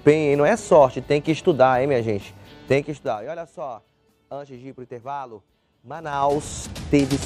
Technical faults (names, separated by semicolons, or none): zipper noise